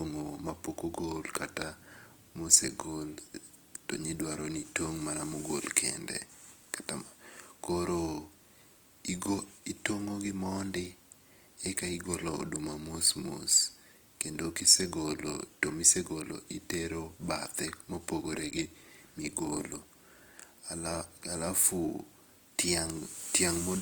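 Opus compression affects the speech throughout and is plainly audible. Tones sound grainy, rough and noisy rather than swirling, as starved bands are filled with noise or folded copies. This is likely Opus in CELT mode at a rate around 24 kbps, with content still reaching 20.2 kHz.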